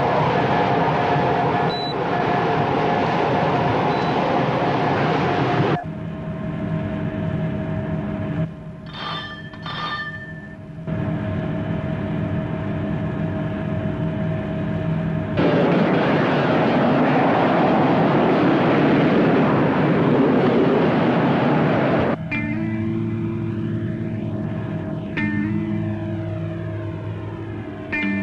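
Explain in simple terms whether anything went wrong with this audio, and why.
Nothing went wrong with this audio that a listener can hear. There are no sudden breaks, jumps or odd sounds anywhere in it.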